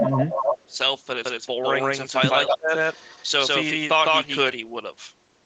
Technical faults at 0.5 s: speech suppressed in double talk; echo leak

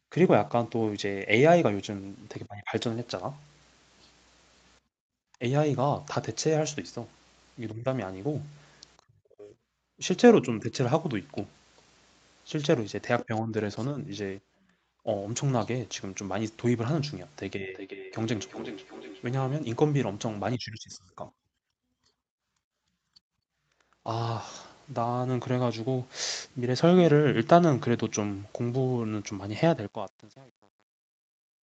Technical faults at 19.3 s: feedback echo between two devices

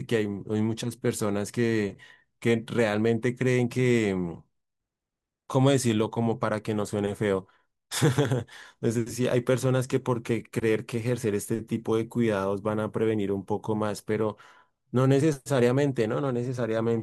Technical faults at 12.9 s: none

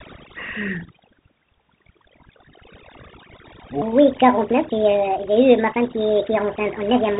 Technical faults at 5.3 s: overdone noise removal; Bluetooth CVSD headset codec; section at the wrong speed

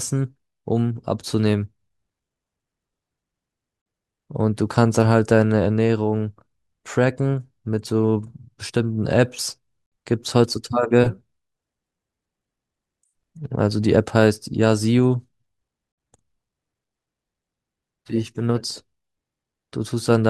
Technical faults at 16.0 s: gap at a join of encoded pieces

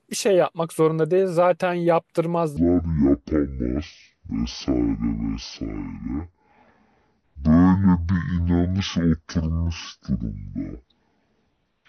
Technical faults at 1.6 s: none

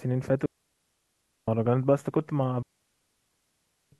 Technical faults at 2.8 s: digital wireless dropout

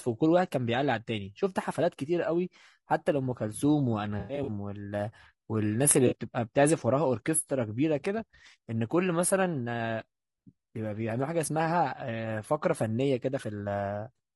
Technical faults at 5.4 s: low-delay AAC compression

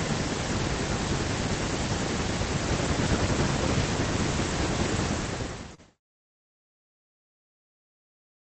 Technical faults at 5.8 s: short concealed packet loss

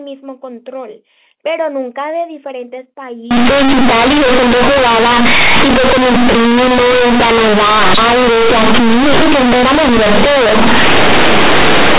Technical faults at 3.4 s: companded audio read as linear

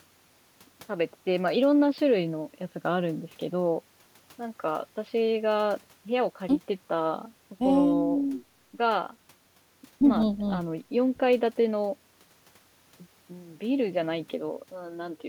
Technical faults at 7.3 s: none

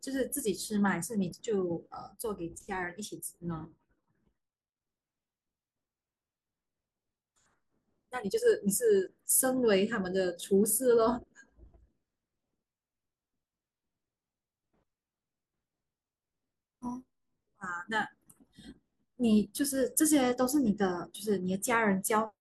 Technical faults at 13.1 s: none

